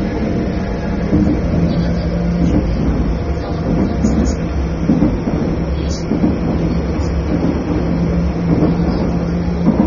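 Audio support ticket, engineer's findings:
Likely AAC compression at low bitrate, around 24 kbps, throughout. Nothing above 6.9 kHz; dull, smeared top end with audible fizzy, warbling artefacts.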